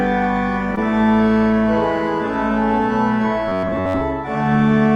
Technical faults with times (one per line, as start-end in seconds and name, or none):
0.75-0.79 short concealed packet loss
3.48-4.02 robotic sound from repeated short buffers